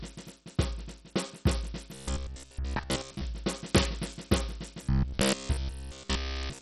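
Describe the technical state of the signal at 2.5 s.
At 2.5 s the music sits inside a stretch from 1.94 to 3.24 s where playback likely fell behind and the software kept replaying its last short buffer instead of fresh audio. The repeats lock onto a 66.8 Hz cycle, which fits a buffer about 15 ms long, and most of the signal in that span is recycled rather than new. The result is robotic sound from repeated short buffers: a rigid, metallic buzz that only loosely tracks the music.

Underneath this, Bluetooth SBC compression runs through the whole clip, with heavy damage that points to a starved bit budget of around 64 kbps. Its coarse sub-band coding gives the upper bands almost nothing, so there is no content above 12.3 kHz. The treble is dull and unstable, and a gritty, quantised grain sits on what remains, adding to the harshness of the buzz at this moment.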